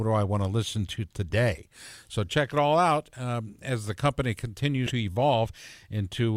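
Compressed frames skipped at 1.30 s and from 4.86 to 4.92 s: whole decoded blocks of the speech go missing, jumping ahead by roughly 30 ms and then about 100 ms, consistent with 10 ms frames.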